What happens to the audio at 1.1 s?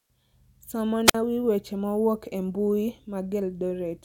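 A wireless microphone squelch dropout, 1.05–1.15 s: the fading radio signal trips the receiver's squelch, so a hiss burst precedes a 50 ms near silence.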